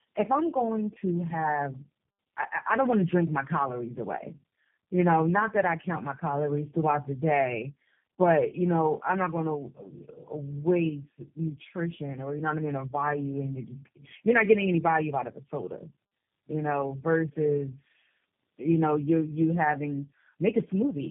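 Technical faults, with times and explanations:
Throughout: tandem speech coding. The speech sounds rough, muffled and warbly, with nothing above 3.5 kHz. It has been through three low-rate speech coders in a row, which fits two AMR-NB passes followed by G.729A, and each coder was handed the previous one's artefacts to approximate again. Unlike a single narrowband codec, the roughness is layered and smeared.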